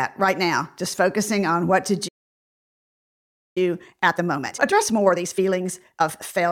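At 2.08 s, right after "focusing on what to", the speech cuts to silence for about 1.48 s, a playback stall, likely the player running dry of data or its thread blocking. From 3.58 s to 6.42 s the speech rushes at 1.5 times normal speed with unchanged pitch: time-compressed catch-up, where the player trims and cross-fades small slices to clear its backlog.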